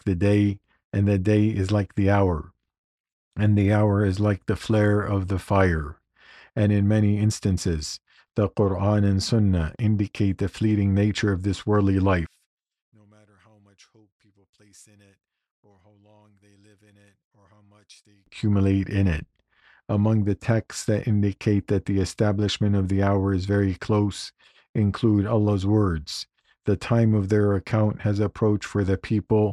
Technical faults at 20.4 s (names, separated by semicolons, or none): none